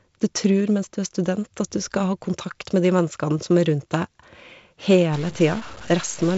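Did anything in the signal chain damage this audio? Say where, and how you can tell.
Yes. From 5.13 s to the end, the speech turns distorted, with noise filling the gaps. This is likely a stuck bit at the converter or its data lines.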